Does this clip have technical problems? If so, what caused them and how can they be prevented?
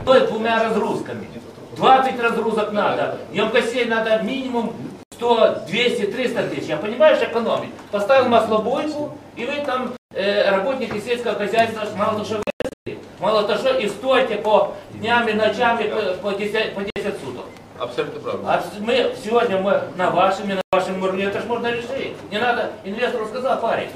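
Yes. The audio cuts out completely five times: at 5.03 s for about 87 ms, 9.97 s for 145 ms, 12.43 to 12.87 s (334 ms of gaps scattered across 435 ms, longest 131 ms), 16.90 s for 58 ms and 20.61 s for 116 ms. Each hole has sharp edges or a brief fade and the sound picks up further along, as if it kept playing. That's most likely a Bluetooth dropout, where packets miss their deadline and get discarded. To prevent it, keep the headphones close with a clear path and away from busy 2.4 GHz Wi-Fi.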